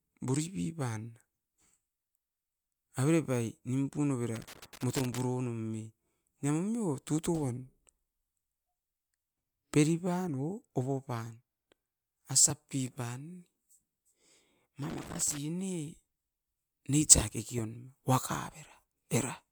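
From 4.36 to 5.21 s and again from 14.90 to 15.38 s, loose connector crackle chops the speech into irregular scratchy bursts; the waveform shows ragged dropouts and spikes, the spectrogram scattered broadband streaks. At 12.47 to 12.51 s, damaged data in a compressed stream throws the decoder out of sync, producing a brief glitch as it searches for the next frame header.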